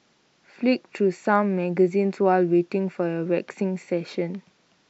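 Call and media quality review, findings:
No findings from the call and media quality review; nothing in the audio calls for a ticket.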